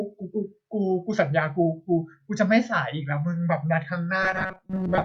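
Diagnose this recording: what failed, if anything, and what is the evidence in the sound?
From 4.23 s to 5.05 s the speech turns into robotic sound from repeated short buffers, a rigid 188 Hz buzz. A likely driver or buffer underrun replays a roughly 5 ms chunk for about half the time: flat harmonic lines on a spectrogram, a repeating waveform.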